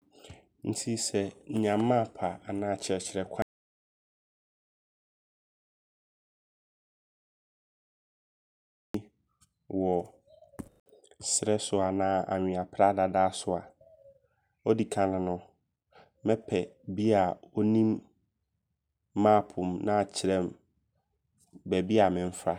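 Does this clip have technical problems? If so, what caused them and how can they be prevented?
Yes. An audio dropout to silence runs from 3.42 to 8.94 s, about 5.5 s of silence with no room tone, so the speech cuts off and resumes abruptly. The likely cause is lost input, such as a disconnected device or stray mute, while recording continued. Securing connections and monitoring input levels during capture prevents it.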